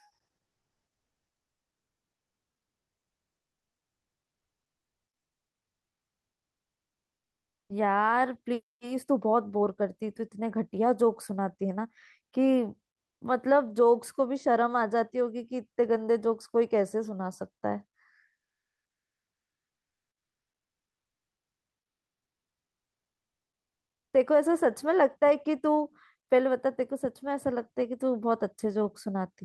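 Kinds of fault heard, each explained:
Comfort noise in place of the background: from 12.93 to 13.21 s, a pause of about 280 ms loses its natural background and gets a smooth, featureless hiss about 16 dB quieter than the surrounding noise floor, which otherwise sits very low, about 66 dB below the loudest speech. The likely cause is discontinuous transmission of the kind Opus DTX performs: the sender goes silent when no speech is detected, and the receiver synthesises shaped noise until speech returns.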